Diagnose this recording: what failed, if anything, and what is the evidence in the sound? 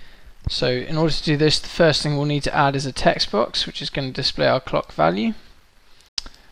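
A single loud pop sits at 0.47 to 0.49 s. It is a sharp transient, around 10 dB above the surrounding sound. The sound keeps running beneath it without a break. That points to the analogue wiring stage. A sudden voltage step, likely from a plug, a switch or a static discharge, was added to the signal. The following circuits shaped that step into a short pulse.

A Bluetooth stall appears at 6.09 to 6.18 s. The sound drops to silence for 91 ms, then resumes. That fits the wireless link to the headphones. Packets were most likely delayed by interference. The playback buffer ran empty and output paused until the resent packets arrived.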